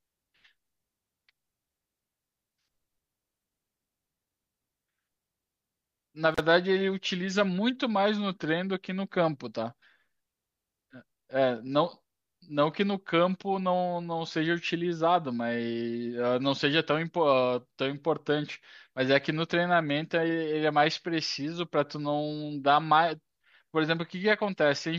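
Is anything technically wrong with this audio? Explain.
Yes. Intermittent contact at 6.33 to 6.40 s: a loose connection opens for about 40 ms, so the speech drops to faint hiss, with crackle at each edge.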